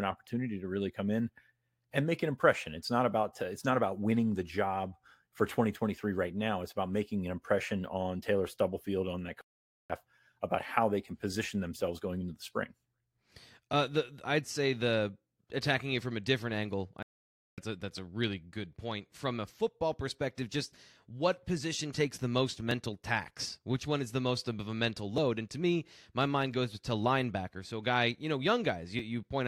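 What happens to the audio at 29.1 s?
Nothing goes wrong at 29.1 s; the speech carries on intact through that moment, with no audible fault.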